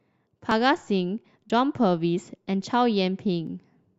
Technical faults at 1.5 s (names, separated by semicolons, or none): overlap between stream segments